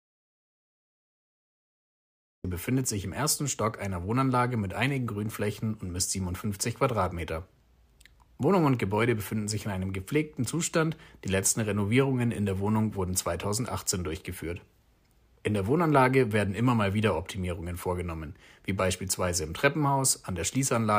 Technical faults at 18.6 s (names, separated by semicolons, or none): none